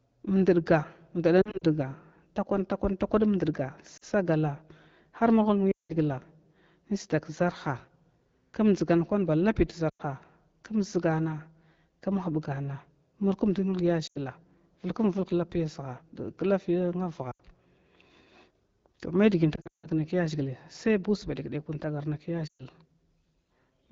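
Radio errors knocked out speech frames on this AMR wideband speech call, which sounds consistent with 12.65 kbit/s. The decoder bridged each lost AMR speech frame by reusing its last pitch and vocal tract settings at falling gain, so the speech briefly smears and fades at 1.41, 3.97, 5.72, 9.89 (after "kwan ba lapi"), 14.07, 17.31, 19.55 and 22.47 s (after "sai ba usa wantagarnai"). The 19.55 s gap, between "to may dgi in" and "mai kya", holds a 160 ms run that dies to silence before the speech returns momentarily rough.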